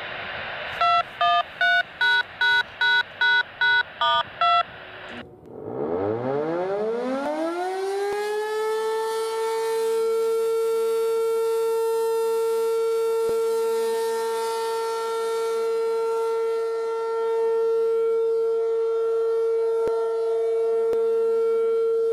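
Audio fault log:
5.46, 7.26, 8.13, 13.29, 19.88 and 20.93 s: likely dropped buffers (overruns), each a point where roughly 10 to 20 ms of audio vanishes and the sound jumps ahead without any gap. The waveform shows an abrupt discontinuity, and the spectrogram a thin vertical broadband streak.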